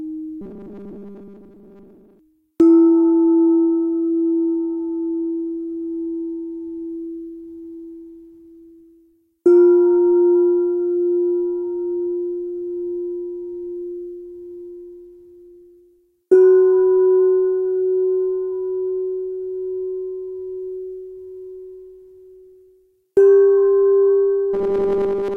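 Audio likely arrived too seldom, so short buffers were replayed in place of skipped material, from 0.41 to 2.19 s and again from 24.54 s to the end. This robotic sound from repeated short buffers stamps a rigid, metallic 200 Hz buzz over most of the sound, which fits a 5 ms buffer.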